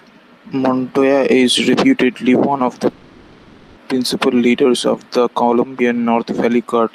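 At 2.89 s the speech stalls into a call audio freeze. The last sound carries on as a fading buzz until 3.78 s, then resumes right where it stopped, nothing skipped, so everything after sits about 870 ms later. Likely delayed packets draining the jitter buffer.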